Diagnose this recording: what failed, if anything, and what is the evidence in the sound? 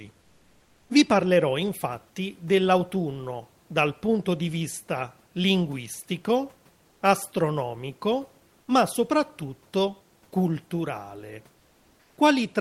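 Codec stage: comfort noise in place of the background at 0.21–0.89 s and 6.87–7.01 s, smooth featureless hiss about 2 dB down, likely Opus DTX.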